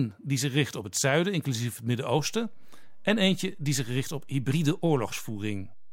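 At 2.19 s, right after "het zuiden inclusief het", there's a DC step: the waveform's zero line jumps by about -38 dBFS and stays offset through the end. You hear it as a single low thump while the speech carries on unaffected.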